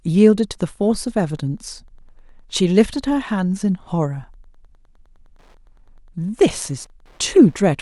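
From 0.44 s to the end of the speech, Wi-Fi interference is present: a nearby radio's beacon, sent every 102.4 ms, is rectified by the audio circuit. It sounds like a steady ticking, just under ten per second, sitting roughly 45 dB below the speech.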